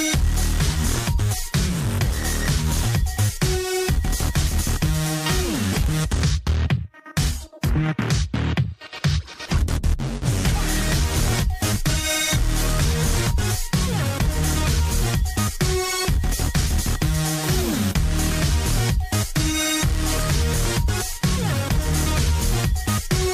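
At 7.61 to 7.63 s a sharp attack is preceded by pre-echo, a hiss about 21 ms long that rises roughly 17 dB above the quiet before the onset. The transform codec spread quantisation noise across a whole block, and because the encoder never switched to short blocks, the noise meant for the loud attack leaked backward into the silence. The smear fits a window of about 36 ms, and the attack sounds blunted.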